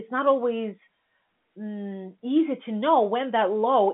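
Nothing stood out on listening to this speech recording.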